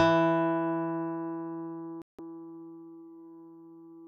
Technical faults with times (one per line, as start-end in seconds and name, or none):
2.02-2.19 digital broadcast dropout